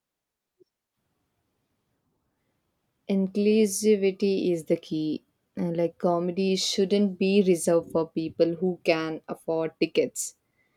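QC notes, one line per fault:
Nothing stood out on listening to the speech.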